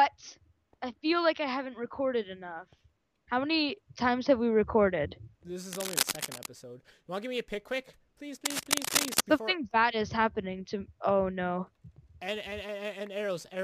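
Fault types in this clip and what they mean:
Cable scratch noise: from 5.73 to 6.46 s and again from 8.45 to 9.21 s, each burst lasting roughly three quarters of a second, a dense, ragged scratching and rustling sits over the sound. The first is a little below the programme level and the second about as loud as it. The likely cause is a worn cable, connector or control being moved, so its contact resistance jumps about rapidly and injects uneven noise into the signal.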